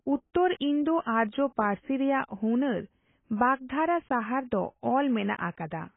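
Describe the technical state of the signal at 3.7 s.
AAC compression damage is present at 3.7 s, as it is throughout the clip. The spectrum stops dead at about 3.8 kHz, and what remains sounds dull and smeared, with a warbling, fizzy texture on sustained sounds and sibilants. This is likely heavy AAC-LC coding. With too few bits to spend, the encoder discards the upper band and quantises the remaining frequency lines so coarsely that gaps and substitute noise appear, which points to a bitrate around 16 kbps.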